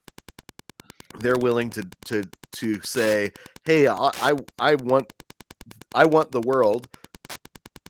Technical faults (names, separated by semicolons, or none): Wi-Fi interference